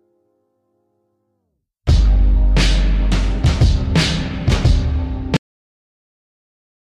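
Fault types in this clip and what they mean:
Cut-off end: the sound just stops dead at about 5.37 s, right in the middle of whatever was playing, and everything after that is pure digital silence. Nothing rings out or fades. The tail simply isn't there, which is what you get when the final chunks of audio never made it into the file or out to the output. The abrupt drop to silence gives it away.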